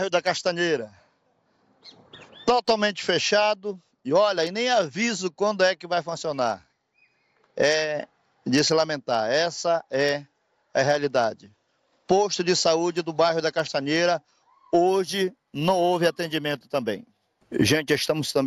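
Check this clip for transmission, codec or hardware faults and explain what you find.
One fault is present, in the closing seconds. From 14.88 s to the end at 18.47 s there is imaging from linear upsampling. The audio was raised from 16 kHz to 48 kHz by straight-line interpolation, which dulls the top of the band just below 8 kHz and leaves a mirrored copy between 8 and 16 kHz, roughly 25 dB down. That copy is heard as a faint metallic shimmer. Unlike aliasing, the stray content sits above the band edge as a reflection.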